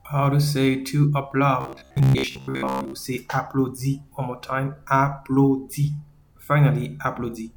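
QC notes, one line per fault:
1.61–2.93 s, robotic sound from repeated short buffers: incoming audio likely stalled, so an about 15 ms slice looped through most of this span, giving a rigid metallic 66.8 Hz buzz.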